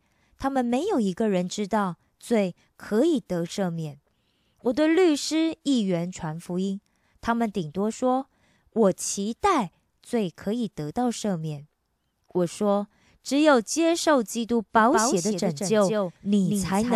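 A doubled audio track enters abruptly at 14.76 s in this speech recording and runs to the end: a second, full-band copy trails around a fifth of a second behind, roughly 5 dB quieter, with no decay or room colour, most likely from a slower second capture path.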